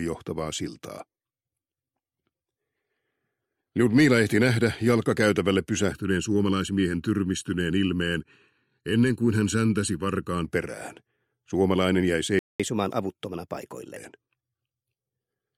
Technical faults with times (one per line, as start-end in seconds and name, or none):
5.92-10.45 channel delay (comb filtering)
12.39-12.60 playback stall
12.60-13.97 catch-up at higher speed